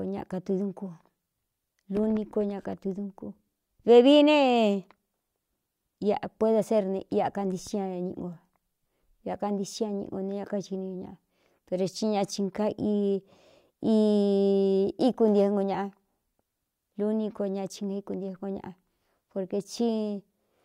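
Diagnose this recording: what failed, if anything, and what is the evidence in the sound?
Nothing failed; no stage shows any audible fault.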